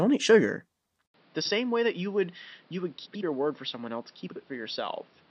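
Just after "eat sugar", at 1.06 s, the speech goes quiet for about 80 ms and then returns duller and boxier. It stays that way to the end, with nothing above 5.6 kHz, a level roughly 10 dB lower, and a new noise floor around 30 dB down. The input likely switched to a poorer device. Because the tone, level and hiss all change together after a gap, this sounds like a different microphone rather than a filter applied to the same one.

Frames out of order then garble three short stretches: 1.41 to 1.51 s, 3.05 to 3.23 s, and 4.27 to 4.36 s. In each, two adjacent blocks play with their halves exchanged, about 43 ms, 85 ms and 43 ms long, which points to runs of two, four and two frames. Each stretch makes a brief flutter. Unlike a dropout, nothing is missing and the timing stays intact.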